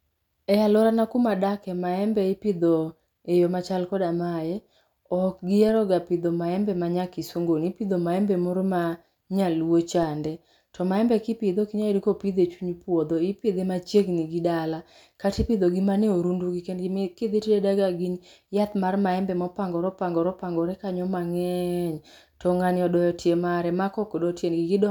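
At 5.69 s, just before "pidho maembe ma nya", and again at 10.03 s, just after "maembe moro ma nyaluo", a DC step shifts the waveform's zero line by about -30 dBFS. Each shift then drains away through a 20 Hz high-pass, giving a brief low thump while the speech carries on. On the waveform the trace jumps off centre and settles back. A spectrogram shows a thin vertical broadband line with energy pooled below 20 Hz.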